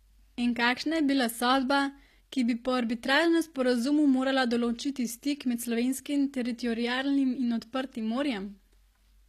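Speech whose s sounds come out gritty and lispy throughout, with nothing above 14.9 kHz, likely from HE-AAC compression at a bitrate near 24 kbps, its treble rebuilt from copied lower bands.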